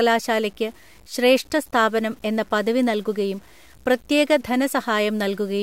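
Speech runs through with a gritty, grainy edge that shifts with the voice, roughening quiet stretches: low bit depth without dither, likely 8-bit truncation, with noise about 35 dB down.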